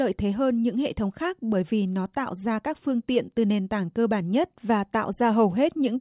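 No technical faults are audible.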